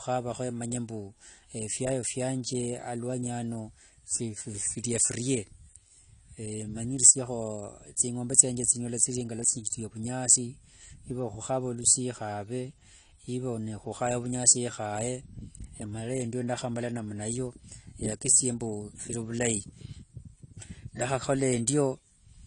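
From start to finish, the speech has nothing above about 10.2 kHz. The top end stops at a hard wall, so sibilants sound dull and airless. The file is a large MP3, but the sound points elsewhere. This is likely low-bitrate audio saved at a high bitrate. A cut-off this low fits an earlier AAC encode at around 32 kbit/s. Re-encoding at 320 kbit/s could not restore what that first pass removed.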